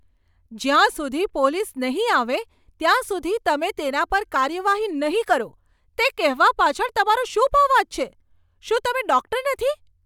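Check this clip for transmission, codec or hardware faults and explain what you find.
The speech signal carries no audible transmission, codec or hardware faults anywhere in the recording.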